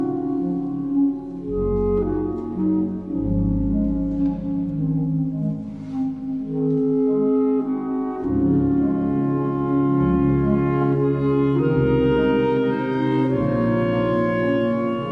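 Throughout the clip there is a wrong sample rate fault: the samples are clocked out at two-thirds of their intended rate without conversion, which fits 48 kHz material played at 32 kHz. The audio therefore runs at 0.667 times normal speed, sounding slow and about seven semitones low.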